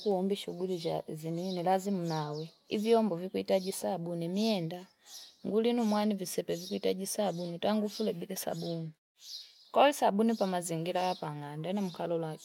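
No technical faults can be heard in this speech clip.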